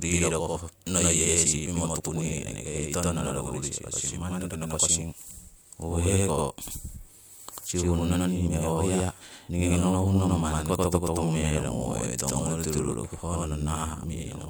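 From start to finish the speech carries a channel delay (doubling). One channel runs about 92.9 ms behind the other, which fits a 4096-sample buffer offset. Summed to mono, the late copy arrives at equal level as a distinct slap echo trailing every syllable.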